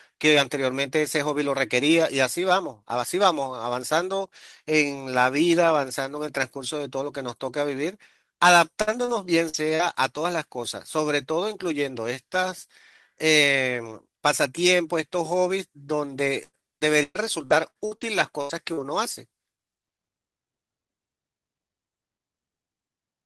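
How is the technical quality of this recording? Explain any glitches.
The recording has clear network damage in two places, with the worst of it between about 16 and 19 s, where the speech turns choppy and glitchy.

Repeated packet loss (robotic sound) appears from 8.81 to 9.81 s and again from 16.25 to 18.03 s. The speech goes choppy. Packets kept going missing, with four gaps in the first stretch and seven in the second. The longest gap was 120 ms, and about a quarter of the second stretch was patched by extending earlier sound.

A burst of packet loss runs from 18.41 to 18.51 s. The sound smears into a held buzz or fading hiss, then jumps ahead. Roughly 80 ms of consecutive audio never arrived in time, and the receiver stretched and faded the last sound to cover it.

Short concealed packet loss from 18.73 to 18.79 s gives a brief wobble or smear, and a quick consonant can disappear. 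About 40 ms was missing. The receiver filled it by continuing the preceding sound, then blended back into real audio.

Lost packets rebuilt from error correction occur at 18.49–18.51, 18.67–18.69, 18.77–18.79 and 19.11–19.13 s. Each is a 20 ms moment that sounds rougher and noisier. No gap is heard, because the following packet carried a low-bitrate backup copy that the decoder played instead.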